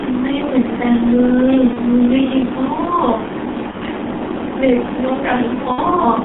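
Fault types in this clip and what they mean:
G.723.1 codec: An early low-rate telephony coder running at about 6.3 kbit/s in 30 ms frames, here holding the speech to a line band of roughly 200 Hz to 3.6 kHz with heavy damage. The result is muffled, hoarse speech with smeared consonants across the whole clip. Unlike plain band-limiting, the roughness comes from the coarse, slowly updated voice model, so the voice itself sounds rasped rather than just dull.
VoIP packet loss concealed by the speech codec: Missing frames are filled by the decoder guessing forward from its last pitch and filter, fading the level as it goes. Single 30 ms losses occur near 1.73 s and 3.71 s, and a 60 ms gap near 5.72 s, each heard as a brief buzzy or tonal smear that dips and recovers slowly. Unlike a dropout, there is no silence, only stretched, synthetic-sounding speech.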